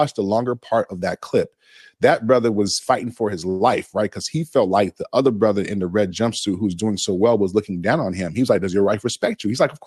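From 3.49 to 3.62 s, just after "was fighting for his", a call audio freeze holds the sound for about 107 ms. The last sound is stretched into a brief fading buzz, then the audio resumes exactly where it stopped. Unlike a dropout, nothing is lost; the audio is only delayed, likely because late packets drained the jitter buffer.

From 9.06 to 9.76 s, a jitter buffer speed-up plays the audio about 4% fast, trimming some 40 ms in small pitch-period cuts. The pitch stays put as the audio runs faster, which sets it apart from a plain playback-rate change. The call path has a band limit near 12 kHz, consistent with Opus at around 32 kbps.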